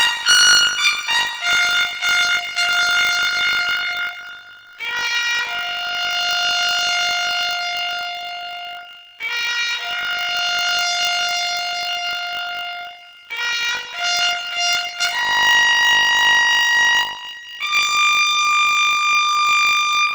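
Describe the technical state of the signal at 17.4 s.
At 17.4 s it's still planar audio read as interleaved, running the whole clip: 20 ms blocks each replay at double speed, giving a robotic 50 Hz buzz.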